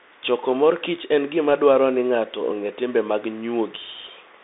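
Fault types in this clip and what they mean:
Bluetooth CVSD headset codec: a one-bit up-or-down delta coder chases the waveform with an adapting step, leaving plainly audible granular roughness on the speech. A spectrogram shows energy confined to roughly 250 Hz to 3.7 kHz, blank above 3.8 kHz.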